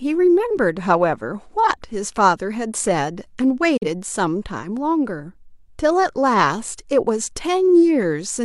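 The receiver briefly lost valid digital frames, which is a digital broadcast dropout in this speech clip. Between 3.77 and 3.87 s it muted rather than play corrupt data, so the sound fades to silence over about 8 ms and then returns. The gap points to a single failed frame, and roughly 43 ms of the programme is simply missing, heard as a short hole in the speech rather than a click or distortion.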